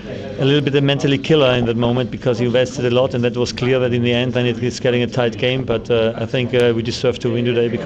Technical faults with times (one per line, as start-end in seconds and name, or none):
0.00-7.86 MP2 compression
1.15-1.97 DAB burbling
5.42-5.74 DAB burbling